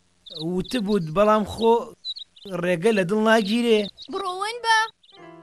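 One channel drops out from 4.21 s to 5.42 s, likely a stereo side lost before the mono sum, so shared sound falls abruptly by about 6 dB.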